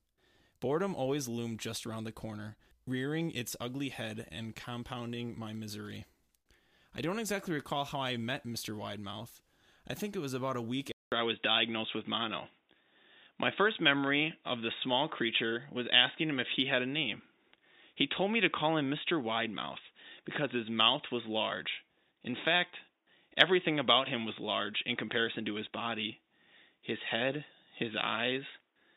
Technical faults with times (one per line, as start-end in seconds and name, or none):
10.92-28.97 input switched to a poorer device